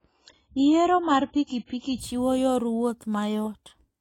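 From 0 to 2.0 s, an adaptive stream starting at a low bitrate: stronger codec artefacts, nothing above 7.7 kHz (fitting 16 kbit/s AAC), then a sudden, gapless step up.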